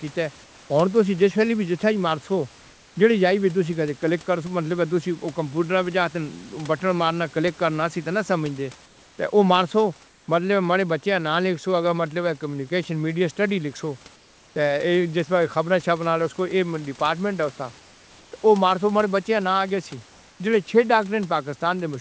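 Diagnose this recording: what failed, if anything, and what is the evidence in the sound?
Comfort noise in place of the background at 0.44–0.70 s, 8.86–9.18 s, 10.08–10.28 s and 14.16–14.56 s: pauses lose the room's detail, becoming flat hiss about 3 to 4 dB quieter. Likely discontinuous transmission in call processing, with the receiver synthesising noise.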